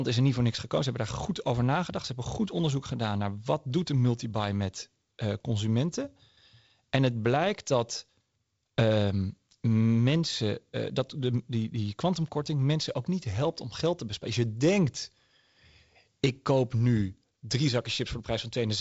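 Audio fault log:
No faults are heard in this speech recording. The G.722 wideband telephone coding path is audible as a ceiling at about 7.7 kHz with a light hiss in the upper band and a slightly grainy lower band, which fits its 48 kbit/s mode.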